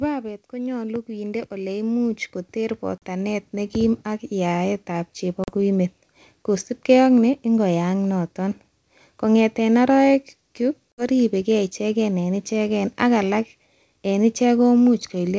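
Speech recorded over a call suffers from automatic gain rising between 0.5 and 5.66 s. The level climbs by about 15 dB, and voice and background noise swell together, which rules out a louder talker. Packet loss on an ADPCM call cuts hard-edged silent holes at 2.98 s (40 ms), 5.44 s (40 ms) and 10.92 s (60 ms, just before "riebege ichegen"), each spanning a few packets. Unlike a simple dropout, the audio returns slightly distorted, settling within tens of milliseconds as the decoder's predictor and step size resynchronise.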